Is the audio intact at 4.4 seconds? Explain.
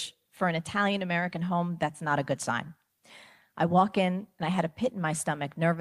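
Yes, the speech at 4.4 seconds is intact, with no audible fault at that moment.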